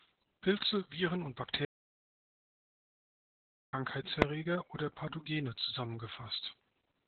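Throughout, the speech carries Opus voice compression at 8 kbps. The codec runs in its SILK mode at narrowband, so the band stops near 4 kHz. The excitation is coded coarsely. The damage is heavy: muffled, hoarse and slightly robotic.

From 1.65 s to 3.73 s there is an audio dropout to silence. About 2.08 s of sound vanishes. The gap is silent, with no room tone. The likely cause is lost input while the recorder kept writing silence.

At 4.22 s comes one loud bang. These are invalid numbers at full scale. A calculation produced infinite or invalid values, which were pinned at one extreme value. The block lasts about 0.73 ms, which fits a 32-sample block. It is too short to hear as two pops.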